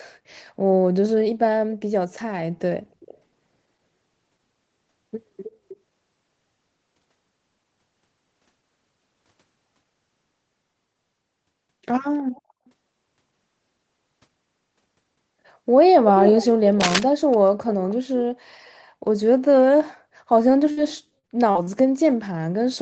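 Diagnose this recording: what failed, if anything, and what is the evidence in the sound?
Faint, delayed repeats of the speech surface at 3.0–3.18, 5.44–5.5, 5.68–5.77, 12.19–12.41 and 17.31–17.49 s, trailing the original by 315 ms and sitting roughly 20 to 30 dB below it. This is echo leak, likely from a far-end loudspeaker whose echo canceller left residue in the call-processing stage.

A brief rough scratching bursts over the speech from 16.80 to 17.03 s, roughly as loud as the speech itself. That dense, uneven crackle is cable scratch noise, likely a worn connector or cable in the analogue wiring being moved, its contact resistance fluctuating rapidly.

At 20.71–20.79 s the last sound is held briefly and fades, then jumps ahead with about 60 ms skipped. This burst of packet loss occurred on the network: the receiver stretched the last sound to cover missing packets, then resumed later.

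From 21.19 to 21.69 s the speech turns choppy, with four short holes, the longest 43 ms. About 140 ms is missing and 28% of that half-second is patched. This is repeated packet loss, with concealment filling each gap in quick succession.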